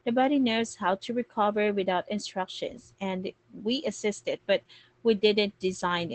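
Speech clip with Opus voice compression throughout: no content above about 8.6 kHz, and a plainly audible muffled, hoarse, slightly robotic quality. That points to Opus's SILK linear-prediction coder in wideband mode coding the excitation coarsely, consistent with roughly 12 kbps.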